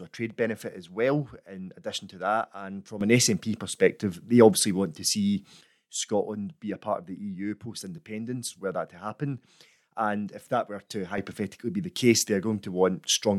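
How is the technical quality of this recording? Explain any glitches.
The recording has two abrupt level steps. At 3.01 s the speech and the background noise leap up together by about 10 dB and hold there until 5.61 s. After "if that were to", at 11.18 s, a second jump of about 8 dB lasts to the end. Each is a sudden gain jump, likely a digital gain change applied between one sample and the next with no ramp to smooth it.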